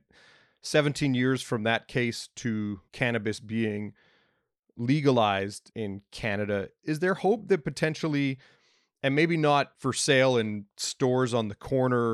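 No technical faults can be heard anywhere in this speech recording.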